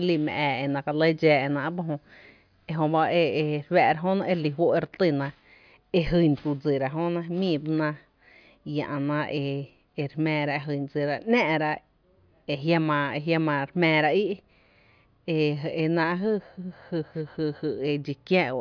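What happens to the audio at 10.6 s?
At 10.6 s the speech runs on intact, with no dropout, click, distortion or other fault at that moment.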